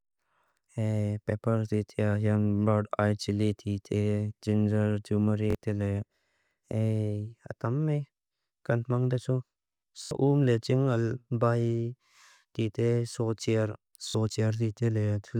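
Repeated buffer stutters at 5.50, 10.03 and 14.08 s: a 21 ms chunk, fitting a 1024-sample buffer, replays with hard joins when audio arrives late.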